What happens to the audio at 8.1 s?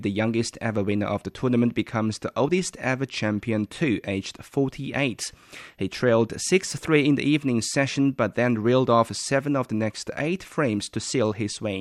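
Nothing goes wrong at 8.1 s: the speech carries on intact through that moment, with no dropout, click, distortion or other fault.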